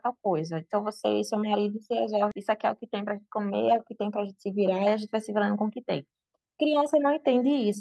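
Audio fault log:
2.31 to 2.33 s, skip ahead: about 0.7 s of speech is dropped and both sides are spliced with no gap; the waveform and spectrogram show an abrupt seam with no silence.
2.51 to 6.07 s, jitter buffer speed-up: pitch-period slices are repeatedly cut, totalling about 0.3 s, so speech runs 107% fast at unchanged pitch; spectrogram harmonics stay level while syllables compress.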